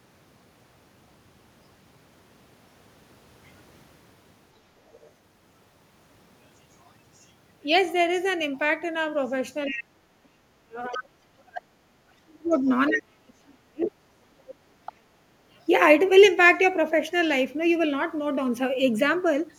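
At 4.86 to 5.11 s, a faint second voice sits under the talker, far below them. This is the other side's voice leaking through. The far end is likely playing on a loudspeaker, and the echo canceller has left part of it in the microphone signal.

From 9.69 to 12.68 s, and again from 12.89 to 13.93 s, the talker's level sinks sharply. At worst it falls by about 35 dB. This is speech suppressed in double talk. Both sides are likely talking at once, and the canceller pulls everything down because it cannot separate the talker from the echo.

Inside these stretches the leak returns as short scraps: 9.72 to 9.78 s, 10.92 to 11.03 s and 13.82 to 13.91 s. The scrap at 10.92 s is the loudest of the clip. The suppression lowers the talker while these fragments stay audible.

Two more brief scraps follow, at 14.48 to 14.54 s and 14.86 to 14.93 s.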